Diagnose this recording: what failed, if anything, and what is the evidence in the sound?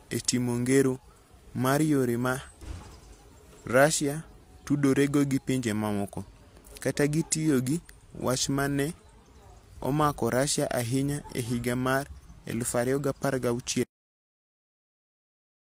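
The speech is a cut-off end, a storage or buffer fault. At 13.83 s the speech stops mid-sound and falls straight to digital silence with no decay, holding there to the close. The final buffers were never written, so the recording simply truncates.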